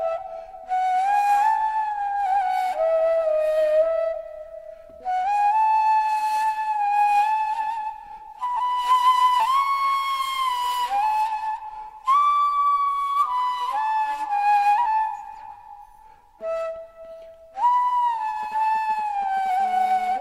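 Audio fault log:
18.43–19.48 s GSM signalling bursts: a nearby 2G phone sends short clusters of radio bursts while signalling, and the audio circuitry rectifies them into sound. The result is a galloping dit-dit-dit of brief 217 Hz buzzes, sitting roughly 20 dB under the signal.
19.60–20.16 s GSM phone buzz: the phone switches to continuous call transmission, pulsing 217 times a second, and the rectified pulses enter the audio path. This produces a steady, hard, raspy 217 Hz buzz rich in harmonics, about 21 dB below the signal and unrelated to it.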